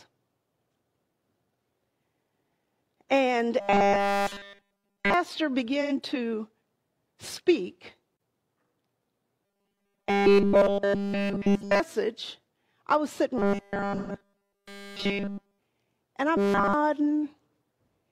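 From 3.60 to 5.14 s the sound turns into a rigid metallic buzz at 200 Hz, likely robotic sound from repeated short buffers looping a 5 ms chunk. At 5.81 s there's a smeared 85 ms patch of AAC frame loss with concealment, consistent with about two frames being filled in from the last good spectrum. The same buzz returns from 9.46 to 11.80 s and from 13.38 to 15.59 s. Inside that second stretch, a longer 128 ms concealment smear runs from 13.96 to 14.12 s. The buzz comes back briefly from 16.37 to 16.74 s.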